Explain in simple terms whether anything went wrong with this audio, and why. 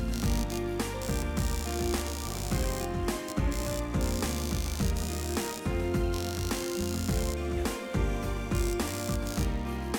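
Something did go wrong: computer activity noise runs through the whole recording. The computer's working load disturbs the electrical ground the audio circuit shares, causing a buzzy pulsing about seventy times a second. It is clearly audible beneath the sound and tracks the computer's activity, not the audio.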